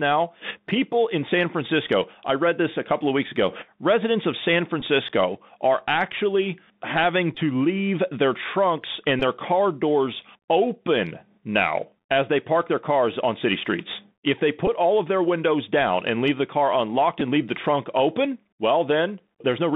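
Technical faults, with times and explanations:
Throughout: Bluetooth CVSD headset codec. The speech is narrowband and boxy, with nothing above about 3.7 kHz and little below 150 Hz. Sibilants turn scratchy, and a fine granular hiss sits under the voice. The damage is plainly audible. CVSD sends a single up-or-down bit per sample, which fits a 64 kbit/s headset link. Its adaptive step cannot keep pace with fast, loud high-frequency movement, so the waveform is approximated coarsely and distorts.
4.81, 7.35–7.38, 9.20–9.22, 14.67, 17.20: Bluetooth headset packet repeated. Each is a short rough glitch, a brief buzzy stutter as a run of packets is repeated. The gaps run from about 7.5 to 18.8 ms, which fits two to five lost 3.75 ms voice packets in a row. When packets are lost, the headset chip replays the last good packet's bits. Repeating a 3.75 ms chunk sets up a momentary periodic buzz near 267 Hz until good packets return.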